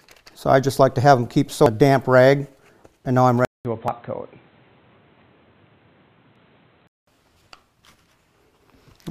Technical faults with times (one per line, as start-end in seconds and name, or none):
1.66 damaged data in a compressed stream
3.45-7.07 input switched to a poorer device
3.88 damaged data in a compressed stream
6.36 damaged data in a compressed stream